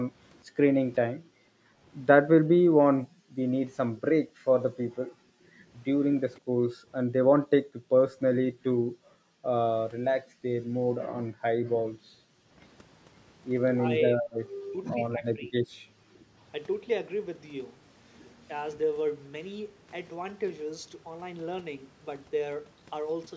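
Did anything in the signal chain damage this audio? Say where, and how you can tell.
Yes. The damage comes from the call processing stage, in the echo canceller. Background gated by the echo canceller occurs from 0.45 to 3.54 s, 4.77 to 12.58 s, and 15.84 to 16.37 s. The room sound sinks by up to about 40 dB (about 35 dB in the last stretch). On a spectrogram the noise floor goes dark in blocks, and it recovers when the canceller releases.

The talker's speech dips from 3.98 to 4.49 s, briefly and by roughly 25 dB. It dips again from 14.17 to 15.56 s, by roughly 20 dB for around a second. The likely cause is speech suppressed in double talk: the canceller couldn't separate the near voice from loudspeaker echo and attenuated both. This shows as sudden envelope notches in the waveform.

A faint echo leak appears from 6.37 to 6.41 s. It is a delayed copy of the speech arriving 505 ms late at about 35 dB below it, likely echo that the far end's canceller failed to remove. 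On a spectrogram it is a faint, short repeat of the earlier harmonic pattern.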